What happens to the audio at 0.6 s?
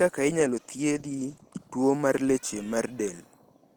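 At 0.6 s the speech sounds rough, watery and muffled, with the top end dulled. This is a call bitrate drop running from 0.4 s to 2.6 s. The call's bandwidth estimate fell, so the encoder was pushed from 32 kbps down to 13 kbps and had to code the speech far more coarsely. At that low rate it also trims the high frequencies. The worst stretch lasts about 1.15 s before the bitrate climbs back.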